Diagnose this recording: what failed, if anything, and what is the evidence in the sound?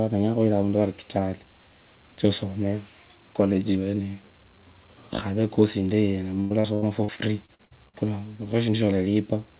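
Network failure: repeated packet loss (robotic sound), 6.4 to 7.95 s. Each hole is patched with earlier audio, so speech turns choppy with pieces missing.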